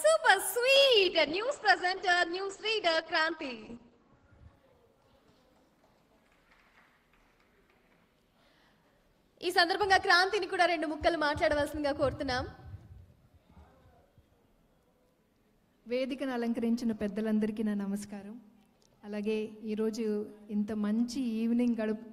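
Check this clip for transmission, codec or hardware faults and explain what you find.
One transmission fault is present: a call bitrate drop from 0.76 s to 6.35 s. The encoder was starved of bits, which fits a fall from about 64 kbps to roughly 10 kbps. Bandwidth narrows from 20 kHz to 8 kHz, so the audio turns muffled and coarse, worst for about 3.3 s, before recovering.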